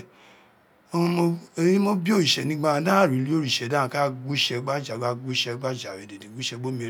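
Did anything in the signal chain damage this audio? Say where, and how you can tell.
No, nothing along the signal chain audibly damaged this speech recording, and every stage from capture to playback leaves the signal intact.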